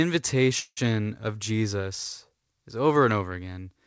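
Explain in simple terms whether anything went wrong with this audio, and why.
Call audio freeze, 0.60 to 0.79 s: sound stalls into a fading buzz, then silence, likely from delayed packets, and resumes later with nothing lost.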